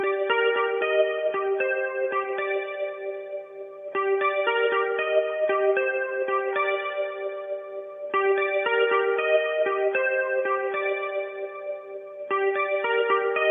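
No technical faults can be heard anywhere in this audio.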